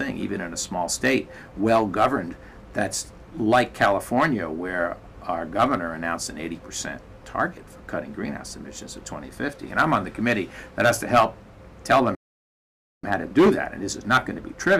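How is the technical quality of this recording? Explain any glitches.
The recording has one glitch. From 12.15 to 13.04 s there is a playback stall. The sound stops dead for about 0.88 s, then resumes. The player likely ran short of data.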